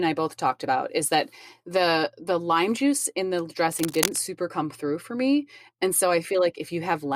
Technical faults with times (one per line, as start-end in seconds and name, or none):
3.59-4.21 cable scratch noise